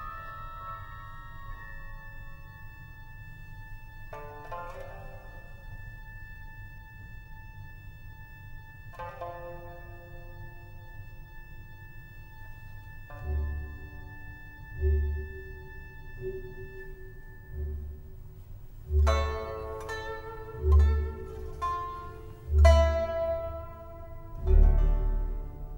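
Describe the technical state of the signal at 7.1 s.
At 7.1 s the signal is inside a time-stretched section running from 5.38 s to 7.58 s, where the audio plays about 1.51 times faster than the surrounding material while its pitch stays unchanged. The pace jumps abruptly at the boundaries, and the section sounds rushed. The likely cause is software compressing that stretch to fit a shorter length, preserving pitch by discarding short pieces of the waveform and splicing the remainder together.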